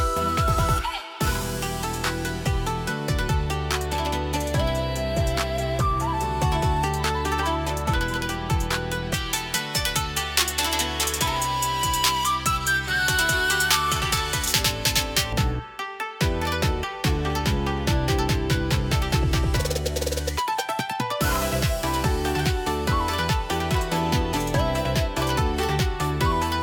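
From 9.14 to 15.33 s the sound turns thin, bright and hissy at the top, with sibilant edges sharpened well beyond the rest of the clip. That is pre-emphasis left on: a treble boost matching the J.17 curve, about 11 dB up at 10 kHz relative to 1 kHz, was applied without the complementary de-emphasis cut.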